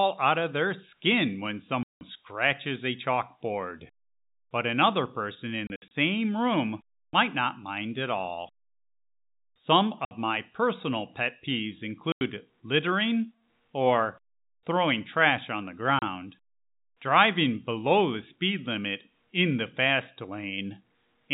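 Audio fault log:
1.83–16.02 s, packet loss filled with silence: dead gaps at 1.83–2.01 s (after "of their skin when"), scattered through 5.67–5.91 s, and at 10.05–10.11, 12.12–12.21 and 15.99–16.02 s. Lost stretches are silenced in multiples of about 30 ms, which points to 30 ms packets. They show as flat silent stretches on the waveform and blank vertical columns on the spectrogram, with hard edges.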